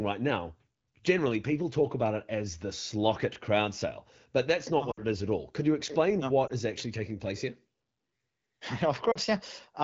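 Lost AMR speech frames at 4.91–5.03 s (just before "is at all"), 6.47–6.52 s (between "you explain no" and "is actually taking place") and 9.11–9.18 s. The decoder held the last good pitch and vocal tract settings at falling gain, so the single lost frame at 6.47 s sounds like a brief dip or warble, while the longer runs drop to near silence within two frames. On a spectrogram, the harmonics go flat and dim for those few tens of milliseconds.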